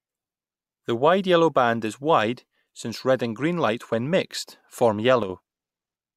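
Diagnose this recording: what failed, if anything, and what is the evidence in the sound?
At 5.23 to 5.30 s the speech falls abruptly by about 6 dB. One channel drops out, likely at a loose analogue connection, halving the mono sum.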